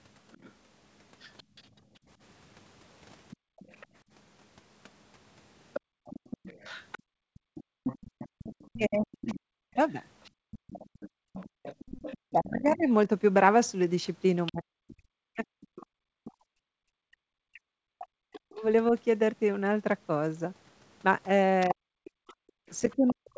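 From 0.32 s to the end, a faint second voice sits about 20 dB under the talker. This is most likely the other side's voice leaking through from the loudspeaker, left behind by an incomplete echo cancellation. Unlike room noise, it carries its own speech rhythm.

Between 1.43 and 11.63 s, the background gated by the echo canceller drops out in short holes adding up to around two seconds, as much as about 39 dB deep.

From 7.8 s onward, the talker's own speech dips and breaks up by as much as around 40 dB, likely speech suppressed in double talk. Here the canceller mistakes overlapping speech for echo, so the voice itself is cut rather than just the background.

At 16.74–16.78 s, a brief 40 ms gap of about 34 dB drops the background again. At 22.33–22.67 s, a gap of about 38 dB lasting roughly 300 ms does the same. Both are further instances of the echo canceller gating the room sound.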